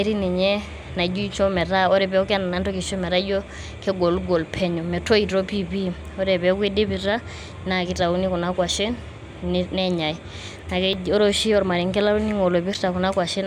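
At 10.93 s and again at 12.73 s the speech jumps slightly ahead, with no gap. Each is likely a dropped buffer (overrun): roughly 10 ms of samples was overwritten before being read, and the surrounding audio was spliced together.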